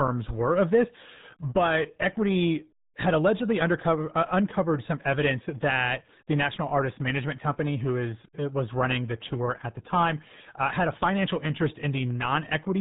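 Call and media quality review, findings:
RealAudio 14.4 codec, throughout: dial-up-era low-rate coding, consistent with an 8 kbit/s stream, cuts everything above 3.9 kHz; speech muffled and gargly, heavy codec damage.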